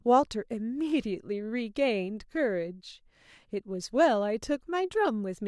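Nothing in the speech recording stood out as a technical problem on listening.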